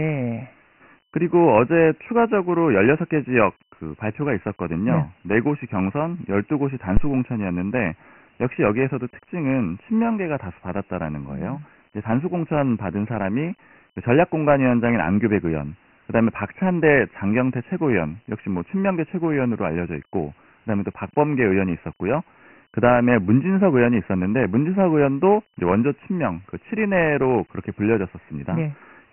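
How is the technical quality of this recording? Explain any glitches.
The technical quality is poor. Two faults are audible: narrowband, gritty coding throughout, and one low thump early on.

Throughout, the speech shows heavy Dialogic VOX ADPCM damage. Nothing is heard above 3 kHz. That fits 4-bit OKI ADPCM at 6,000 samples a second, or 24 kbps. The coarse step-size tracking leaves a gritty hiss riding on the speech.

From 6.97 to 7.15 s there is a phantom power thump. A supply switched on a live input sends a voltage step through the coupling capacitors. It is heard as a deep, dull thud that dies away in about 41 ms.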